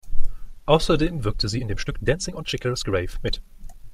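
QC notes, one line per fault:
1.20 to 3.94 s, time-stretched section: from 1.2 s to the end, the speech suddenly runs about 1.74 times faster but the pitch doesn't rise, so it comes across rushed instead of chipmunky. The likely cause is software squeezing this stretch to fit a shorter slot, dropping little slices of the waveform to hold the pitch steady. Those missing slices are what give it that hurried texture.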